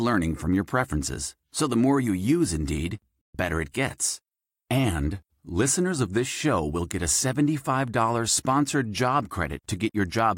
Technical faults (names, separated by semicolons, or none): digital broadcast dropout